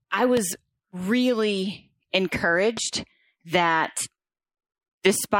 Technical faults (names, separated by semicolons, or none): loud pop